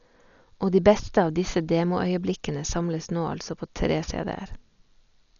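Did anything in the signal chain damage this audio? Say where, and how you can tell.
Yes: at the codec stage, heavy damage runs throughout. The speech is dull, with nothing above 7 kHz, and rough, fluttering noise surrounds tones. This is likely Dolby Digital compression at a starved bitrate, around 40 kbps, where unfunded frequency lines get dither-filled. A plain low-pass filter would not add that flutter.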